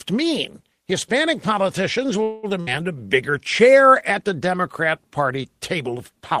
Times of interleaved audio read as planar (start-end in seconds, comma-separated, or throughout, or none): none